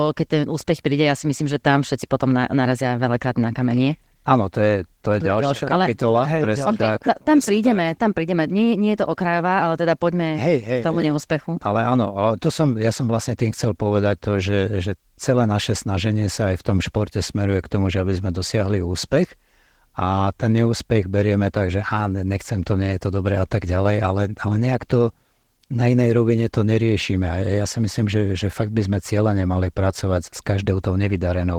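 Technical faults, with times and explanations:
Throughout, Opus voice compression: plainly audible hoarse, slightly robotic coding of the speech, with content reaching up to about 20.2 kHz, consistent with hybrid mode at a rate near 16 kbps. SILK coarsely models the lower band while CELT covers everything above 8 kHz.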